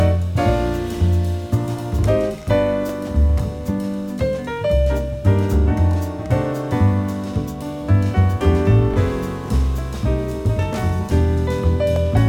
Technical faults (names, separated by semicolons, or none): compressed frames skipped; overlapping chunks